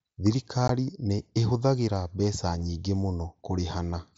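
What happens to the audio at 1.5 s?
At 1.5 s the speech carries on intact, with nothing breaking into it beyond the light wideband character of the Bluetooth mSBC headset codec it passes through.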